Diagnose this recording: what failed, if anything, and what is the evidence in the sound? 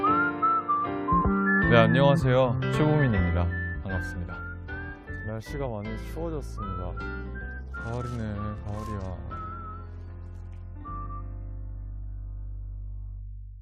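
Nothing in the signal chain appears to have failed: continuity and frequency content stay intact throughout, with no dropouts, clicks, distortion or timing disturbances that would point to a problem at any stage.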